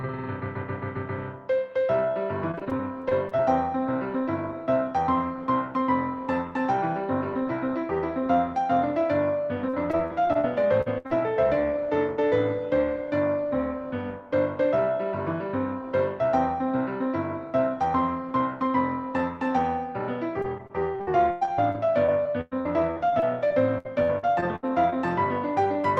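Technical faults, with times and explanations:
2.51–3.42 s, 9.69–10.45 s and 20.42–24.94 s: repeated packet loss (robotic sound). Packets kept going missing or arriving late: 10 gaps in the first stretch, 7 in the second and 24 in the last. The receiver patched each hole by extending the previous sound, so about a fifth of each stretch is synthetic fill. The gaps are mostly a few tens of milliseconds, but one reaches 105 ms. The result is choppy audio with fragments missing.
10.81–10.88 s and 11.07–11.12 s: short concealed packet loss. About 40 ms of audio failed to reach the decoder in time on each occasion. The receiver bridged the hole by continuing the last sound, either from its pitch or as shaped noise, then blended back into the real signal. Each one is heard as a brief smear or wobble, and a short sound can disappear entirely.
10.98–11.07 s: burst of packet loss. Several consecutive packets, about 60 ms of audio, were lost together. 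The receiver continued the last sound while fading it down, so the gap is heard as a held buzz or fading hiss. The audio then resumes a little further on, with the stretch in between missing, and another short loss follows immediately.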